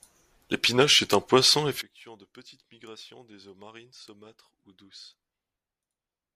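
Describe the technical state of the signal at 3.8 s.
At 3.8 s the speech has collapsed to a faint trace, about 24 dB down, with its centred body largely gone. The drop begins at 1.82 s and lasts to the end of the clip. The likely cause is one channel inverted: with one side's polarity reversed, the material common to both channels cancels when they are summed to mono, leaving only the small difference between them.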